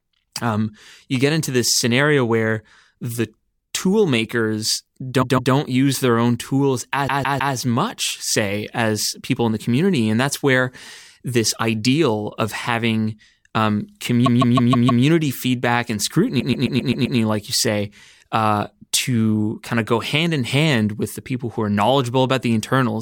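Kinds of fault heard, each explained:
Repeated frames: a short chunk of the compressed stream gets played over again, so the speech stutters, looping the same slice back to back. It happens at 5.21, 7.07, 14.25 and 16.39 s. The first three repeat a 157 ms block (which fits six frames) two, three and five extra times. The last loops a 131 ms block six extra times. Each stutter stretches the audio by between 0.31 and 0.78 s.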